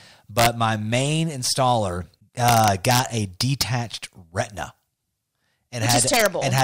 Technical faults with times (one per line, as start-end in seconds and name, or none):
0.38-0.46 integer overflow
2.48-2.99 integer overflow
3.41-3.62 integer overflow
5.89-6.60 integer overflow